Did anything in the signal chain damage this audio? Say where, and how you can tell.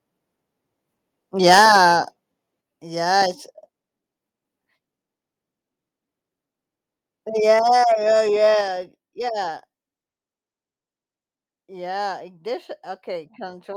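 Yes. From 1.46 to 1.78 s the loudest speech peaks have flattened tops and a harsh crackle, with a few percent of samples pinned at the converter's limit, driven about 7 dB past it. This is microphone overload, likely at the converter input. Codec distortion would smear across quieter passages too, but this crackle tracks only the peaks.

At 2.61, 7.59 and 8.61 s, speech and background fall together by about 5, 3 and 4 dB, each in one instant step that then holds. This is microphone volume stepped down, likely by call processing adjusting the device gain. A compressor would move smoothly and recover, not jump and stay down.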